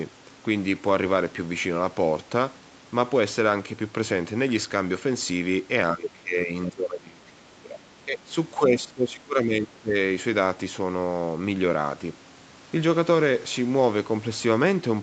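From 5.95 to 7.8 s, 8.05 to 8.31 s and 8.58 to 9.95 s the speech dips and breaks up, by up to about 20 dB. This is likely speech suppressed in double talk by the echo canceller.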